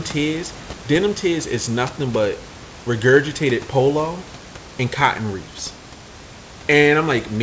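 Nothing stood out on listening to this speech recording.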